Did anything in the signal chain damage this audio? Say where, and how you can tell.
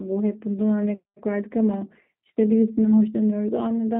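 Yes: the G.729 codec damaged it throughout, rebuilding the speech from a filter, pitch predictor and sparse pulses. Nothing above 4 kHz survives, and the voice sounds plainly rough and synthetic, which fits 8 kbit/s.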